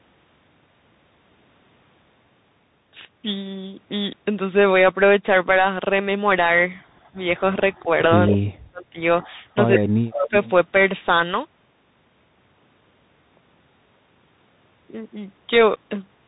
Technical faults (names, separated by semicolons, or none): Bluetooth CVSD headset codec; echo leak; speech suppressed in double talk